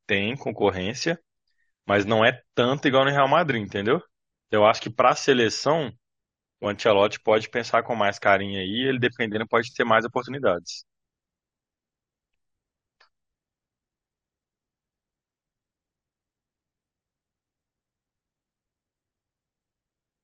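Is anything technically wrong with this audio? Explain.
No, the speech signal holds steady with no technical faults anywhere in the recording.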